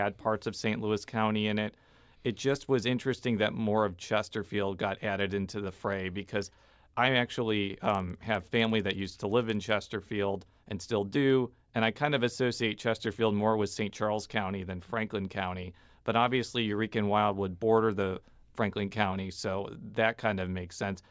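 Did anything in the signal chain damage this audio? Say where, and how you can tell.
Yes. Between 7.85 and 9.85 s, just after "fray because I actually", the speech carries a regular ticking at 20 Hz, a rough buzz that follows the signal and vanishes in pauses. That points to the resampler restarted on every block in the conversion from 48 kHz to 16 kHz. Each 50 ms block was filtered without its neighbours' samples, leaving a small error at every edge. Buffer underruns would leave audible gaps; these ticks don't, and they keep strict timing.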